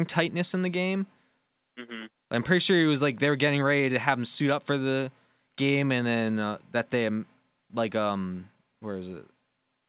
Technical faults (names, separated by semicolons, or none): none